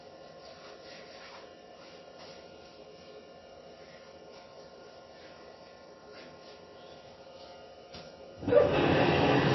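Throughout the clip the treble stops dead at 5.8 kHz, and the sound left below it is plainly watery and swirling, with smeared attacks. The likely cause is heavy MP3 compression at a rate that fits roughly 24 kbps. A plain low-pass filter would dull the sound without that churning texture.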